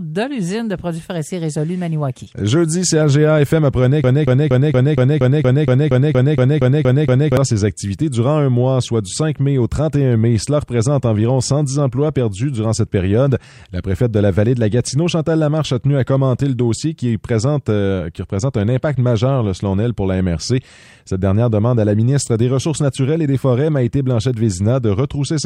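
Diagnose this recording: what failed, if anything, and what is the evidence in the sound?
A broken-record loop runs from 4.04 to 7.37 s: one 0.23 s fragment repeats exactly 14 times, replacing the audio due there. Waveform and spectrogram show identical blocks tiled at 0.23 s spacing. A stalled player, encoder or stream likely kept resending its last fragment.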